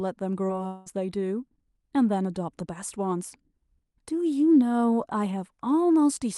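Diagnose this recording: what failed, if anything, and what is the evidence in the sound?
Network stage, short concealed packet loss: about 20 ms went missing at 0.47–0.51 s. The decoder extended the preceding speech to fill it, leaving a brief smear.

Network stage, long network dropout, the likely cause: from 0.67 to 0.88 s, speech becomes a fading synthetic continuation with no silence, then resumes past the lost section.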